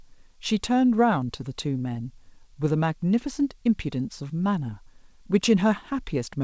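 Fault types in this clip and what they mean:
No faults are present in this speech, which has passed through a call connection working as expected, with nothing above 8 kHz, a band limit that fits a wideband call codec such as G.722 at around 64 kbps.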